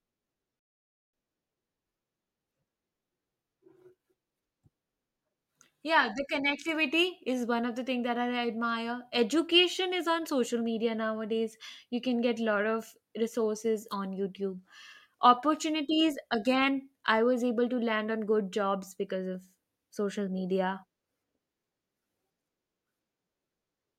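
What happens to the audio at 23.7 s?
At 23.7 s the speech plays through intact, with no dropout, click, distortion or other fault at that moment.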